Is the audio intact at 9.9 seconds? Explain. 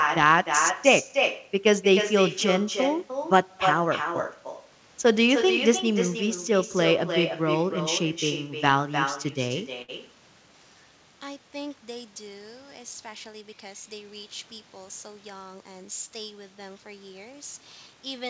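No. A short stall from a late packet runs from 9.82 to 9.90 s. A packet arrived too late, the jitter buffer ran dry, and the receiver stretched the last sound by 66 ms before resuming from the same point. Nothing is lost, but that sound hangs on too long with a slight buzz or dip, and everything after it lands 66 ms later.

An echo with no canceller also runs through this moment. The far end's loudspeaker feeds its microphone, so the sound returns about a third of a second later, about 6 dB quieter and thinner.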